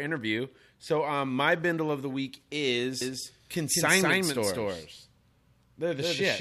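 Speech with a doubled audio track from 3.01 s, after "bindle of the week", to the end. An equally loud copy trails about 200 ms behind, likely from a second capture path, and shows as repeated waveform bursts and duplicated spectrogram patterns.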